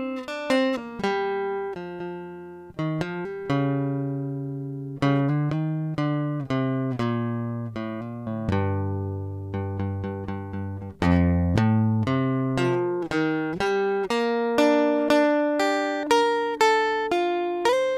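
The music contains no audible technical faults.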